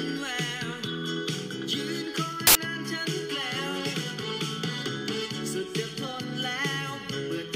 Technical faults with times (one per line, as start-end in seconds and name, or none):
2.47-2.55 samples built from the wrong bytes